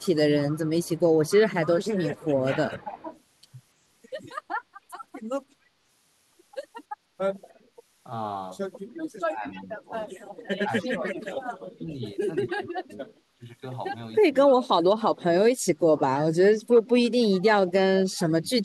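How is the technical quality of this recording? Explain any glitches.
The recording has three kinds of fault: a constant hiss throughout, a delayed echo in places, and the speech being pushed down in several stretches.

Low bit depth with dither runs throughout. It is a steady, even hiss about 30 dB below the speech, which fits an 8-bit signal with dither added. The hiss carries no grit or distortion, which separates it from undithered rounding.

Echo leak appears from 0.0 to 2.26 s, from 14.47 to 14.56 s and from 16.74 to 17.46 s. A faint copy of the speech follows 290 ms behind, roughly 20 dB down. The likely cause is a loudspeaker's sound getting past the echo canceller. It is a discrete repeat, not reverberant smear.

Speech suppressed in double talk occurs from 2.43 to 3.11 s, from 9.26 to 13.45 s, from 14.22 to 16.42 s, and from 17.04 s to the end. The speech dips, by up to about 30 dB in the later stretches, while the other side talks. 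The canceller, likely unable to separate the two talkers, turns both down. Unlike a dropout, the sound sinks and recovers in pieces.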